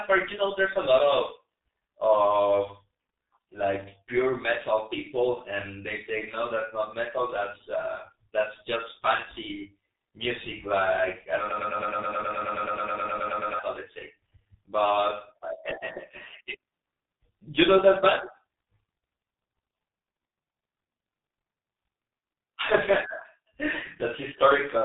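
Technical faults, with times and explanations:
Throughout: G.723.1 codec. The speech is muffled and hoarse, with smeared consonants, as expected from this low-rate telephony coder running at about 6.3 kbit/s. It discards everything above 3.8 kHz and updates its model of the voice only once per 30 ms frame, so fine detail between updates is lost. On a spectrogram, energy stops at a hard ceiling near 3.8 kHz, and harmonics look coarse and blocky instead of smoothly moving.
11.50 to 13.59 s: broken-record loop. Right after "fancy music like i", a fragment of about 0.11 s (106 ms) repeats exactly, back to back, 20 times for roughly 2.1 s, producing a rapid mechanical stutter. The likely cause is a stalled player or stream that kept resending the last fragment it held, so the audio due in that span is missing. The waveform shows an identical short shape tiled end to end, and the spectrogram shows a column pattern repeating every 0.11 s.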